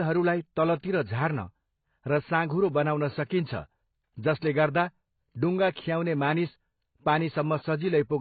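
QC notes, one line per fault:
Throughout: AAC compression. Nothing is present above 4.6 kHz, so the speech sounds dull and smeared, with sibilants blunted and a warbling, fizzy texture on sustained sounds. The damage is heavy: the coder appears to have starved the spectrum, dropping the upper bands and roughly quantising what remains. The sound points to AAC-LC at a very low rate, about 16 kbps, as the likely cause.
0.80–0.83 s and 3.28–3.30 s: pre-echo. A hiss leads each of these two attacks, spreading 36 ms and 22 ms ahead of the onset. The transform block spreads its quantisation noise evenly in time, so noise sized for the loud attack also fills the quiet moment before it. Both transients sound soft and smeared rather than crisp.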